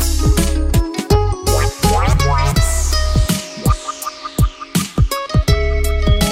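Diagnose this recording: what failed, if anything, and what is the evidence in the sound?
Nothing failed; no fault is audible anywhere.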